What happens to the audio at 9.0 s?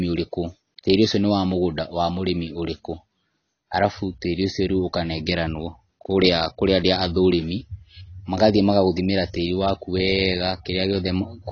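At 9.0 s the speech carries the same AAC compression damage heard across the whole clip, so nothing changes at that moment. Nothing sounds above about 6.6 kHz, leaving the speech dull, and sibilants take on a smeared, fizzy texture. The likely cause is AAC-LC coding at a low rate, which fits about 24 kbps. The encoder quantises each frame's spectrum coarsely, dropping the top band and thinning what remains.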